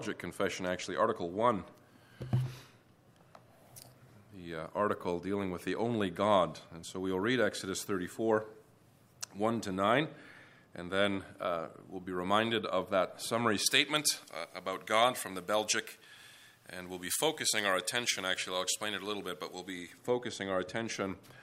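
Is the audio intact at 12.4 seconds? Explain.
Yes, the audio is intact at 12.4 seconds, with no dropout, click, distortion or other fault at that moment.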